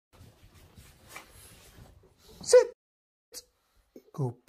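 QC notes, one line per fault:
2.72–3.33 s, playback stall: the audio cuts to silence mid-flow for about 0.59 s, then carries on. The gap is abrupt at both edges rather than faded, so it is heard as a hard dropout, not a pause in the material. The likely cause is the player running short of buffered data or its output thread being blocked, leaving nothing to send to the output until it recovered.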